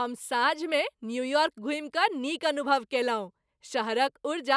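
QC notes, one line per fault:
No faults heard anywhere in this speech clip.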